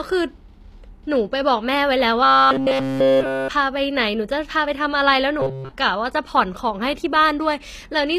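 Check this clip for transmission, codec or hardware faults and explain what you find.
Two faults are present in this speech recording: a coded-sounding treble throughout, and two stretches of robotic buzzing.

HE-AAC compression, running the full length: the sibilants and upper consonants sound gritty and lispy, with damage plainly audible, which fits a low bitrate of roughly 24 kbps. The likely cause is spectral band replication, where the treble is rebuilt from copied lower bands under a coarse envelope, so its harmonics don't match the true signal. On a spectrogram the top band looks smeared and blocky, with nothing above 14.9 kHz.

Robotic sound from repeated short buffers, from 2.24 to 3.48 s and again from 5.40 to 5.71 s: the speech collapses into a rigid metallic buzz at 134 Hz that only loosely tracks the syllables. Essentially all of each stretch is made of repeats of a roughly 7.5 ms slice, likely because audio arrived too seldom and the last buffer was looped while real audio was skipped. 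The waveform shows an identical short cycle tiling those spans, and the spectrogram shows flat, evenly spaced harmonics of 134 Hz.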